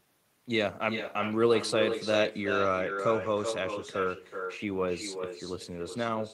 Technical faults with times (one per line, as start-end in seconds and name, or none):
0.00-6.34 echo with no canceller